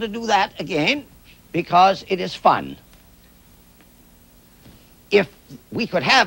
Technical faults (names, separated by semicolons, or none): none